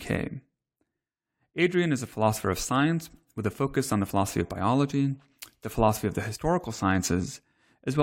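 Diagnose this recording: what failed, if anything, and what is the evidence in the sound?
Nothing in the signal chain has failed: the speech is continuous and intact across every stage from capture and conversion through to playback, with no audible disturbance at any point.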